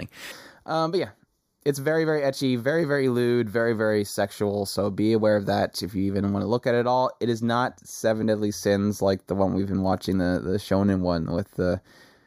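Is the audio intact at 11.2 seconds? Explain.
No, at 11.2 s speech shows channel delay comb filtering, from 0.32 s to the end: one channel lags about 0.2 ms, so the mono sum cuts fixed, evenly spaced notches from around 3 kHz, sounding hollow, unlike the sweeping notches of flanging.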